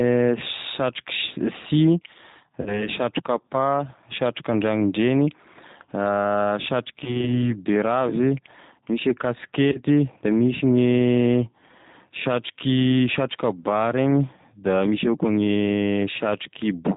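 From the first second to the end the speech carries the G.729 codec, plainly audible at 8 kbit/s: nothing survives above 4 kHz, and the voice has a rough, slightly synthetic grain because each 10 ms frame is rebuilt from a vocal tract filter, a pitch predictor and a few pulses. Unlike a simple low-pass filter, which only dulls the sound, this model-based rebuild adds texture to the voice itself.

Packet loss concealed by the speech codec interrupts it three times. From 2.62 to 2.88 s about 40 ms of audio is missing, which fits two lost 20 ms packets. The decoder keeps extending the last pitch and filter, so the sound smears into a buzzy tone or coloured noise that fades, and stays weak or distorted for a while after audio returns. Versions with less audio missing follow at 7.04 to 7.36 s and 9.72 to 9.78 s, each consistent with one lost packet. A plain dropout would leave silence or a click. 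Here the gap is filled with stretched, decaying voice.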